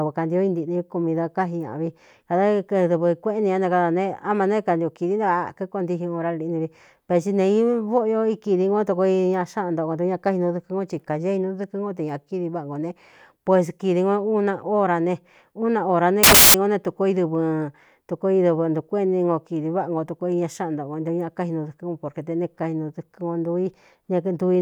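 From 16.23 to 16.54 s, the speech turns into a burst of loud, harsh broadband noise. These are samples built from the wrong bytes. Each value is assembled from misordered or misaligned bytes. The fast-changing low bits end up dominating, so the signal becomes harsh noise.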